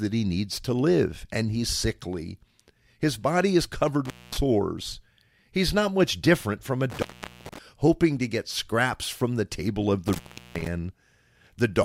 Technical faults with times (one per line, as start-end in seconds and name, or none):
4.05-4.37 intermittent contact
6.90-7.58 intermittent contact
10.07-10.67 intermittent contact